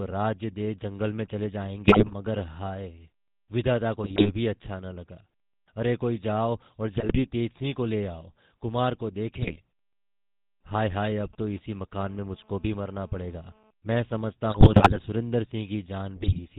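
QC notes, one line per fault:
Throughout: GSM full-rate codec. The speech passes through a 13 kbit/s vocal-tract model driven by regularly spaced pulses, with only every third excitation sample kept and nothing above 4 kHz, so the voice sounds plainly buzzy, gravelly and dull.
1.88–2.15 s, 4.04–4.30 s, 6.93–7.18 s, 9.42–9.57 s, 14.52–14.99 s and 16.16–16.40 s: GSM bit errors. Corrupted bits, which points to an error rate of roughly 2 to 4.4 percent, reach the decoder's filter, pitch and gain values, bending the spectrum frame by frame, so the voice breaks into squawks, pops and gargling.
10.78–12.06 s: GSM signalling bursts. A nearby 2G phone sends short groups of radio bursts while signalling, and the audio circuit rectifies them, giving a galloping dit-dit-dit of short 217 Hz buzzes, roughly 25 dB below the speech.
12.06–13.71 s: GSM phone buzz. A nearby 2G phone in a call transmits in bursts 217 times per second. 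Rectified, this becomes a hard, raspy, harmonic-rich 217 Hz buzz, steady and unrelated to the speech, about 32 dB below it.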